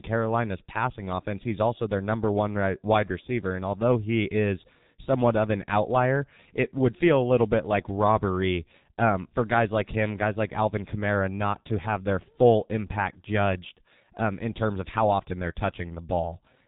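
A speech recording squeezed through the G.723.1 codec for its whole length, at a rate that fits the 6.3 kbit/s mode. Everything above 4 kHz is gone and the slow, frame-by-frame voice model smears transitions, so the voice comes across muffled and hoarse, with consonants badly blurred throughout.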